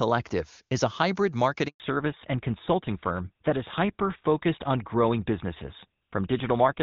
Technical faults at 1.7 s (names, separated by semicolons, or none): handover gap; fallback to narrowband